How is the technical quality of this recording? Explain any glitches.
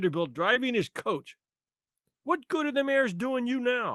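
There's one glitch, a short concealed packet loss, in speech that came over a call link whose highs stop around 12 kHz, which fits a 24 kbps Opus stream.

At 0.53 to 0.57 s, about 20 ms never arrived in time. The receiver extended the preceding sound to fill it, leaving a brief smear or wobble.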